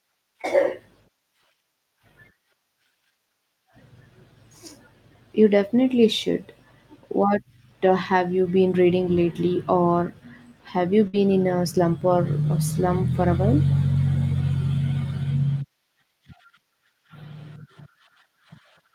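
Speech, marred by two network losses. Near 0.41 to 0.45 s there is a short concealed packet loss. About 20 ms of audio failed to arrive, and the decoder bridged the hole by extending the preceding sound, from its pitch if voiced and as shaped noise if not, before crossfading back. It comes across as a tiny smear or wobble rather than an audible gap, and nothing after it is displaced. The second event, from about 11.07 to 11.15 s, is a burst of packet loss. Roughly 60 ms went missing in a run, three times the first loss. Here the concealment has to sustain the last sound for longer and fades it as it goes, so a voiced stretch turns into a brief held buzz and an unvoiced one into a dying hiss. The stream then picks up later, with that slice of speech absent. The length of the artificial hold and its fade are what set this apart from the quick patch at the start.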